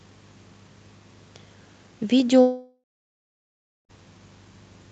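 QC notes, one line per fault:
2.41–3.91 s, long network dropout: the speech smears into a buzzy, fading continuation of its last sound, then drops to about a second of near silence and resumes further along with roughly 1.5 s of speech gone. This is likely a run of packets that never reached the receiver. Concealment stretched the final sound until it gave up, and playback rejoined the stream late, through an Opus call path whose top end stops near 8 kHz.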